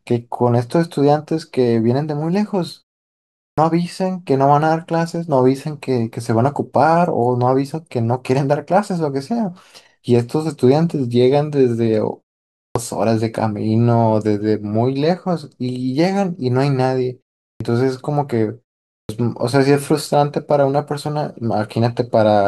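At 3.48, 12.66, 17.51 and 19.01 s, speech bursts out of silence with its opening sounds missing, roughly 80 to 100 ms lost each time. This is clipped start after a pause: after gaps of 0.37 to 0.73 s, the output device sleeps and wakes too late.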